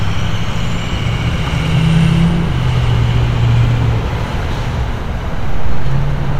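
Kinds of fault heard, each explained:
No faults can be heard anywhere in this recording of sounds. Nothing in the audio points to a problem in how it was captured or handled.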